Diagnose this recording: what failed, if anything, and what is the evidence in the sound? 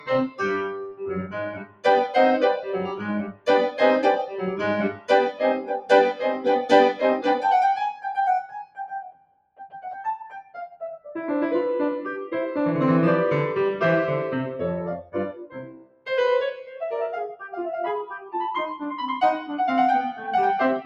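A speech noise suppressor was left on over this music, in the call-processing stage. Level swings by around 10 dB throughout. Attacks come through. Sustained tones and reverb tails sink, so the music pumps and thins. The suppressor is mistaking steady musical content for noise.

Sound cut by the noise suppressor shows as deeper dips at 0.0–1.85, 2.83–3.8, 4.27–4.43, 4.9–6.46, 8.41–10.82, 15.02–16.09, 16.51–16.82 and 18.19–18.34 s. The drops reach about 20 dB. Held or decaying sound is pulled down hardest there, and its tails are cut short.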